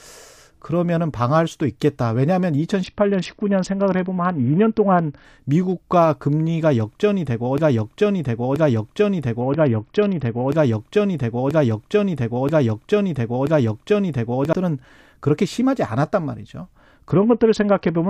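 From 2.84 to 5.25 s the treble goes dull and gritty: a Bluetooth SBC bit pool drop, which fits the bit pool falling from about 31 to 7. Then from 7.58 to 14.53 s there's a broken-record loop, a 0.98 s chunk of speech repeating seven times back to back, likely from a stalled player or stream. The dull, gritty bit pool drop returns from 9.41 to 10.49 s and again from 17.11 s to the end.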